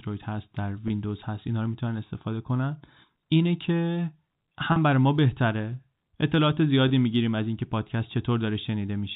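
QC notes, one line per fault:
0.88, 4.72 and 6.88 s, packet loss with pitch repetition: 20, 40 and 20 ms lost, concealed by repeating the last pitch period, so each gap sounds like a brief, buzzy held tone.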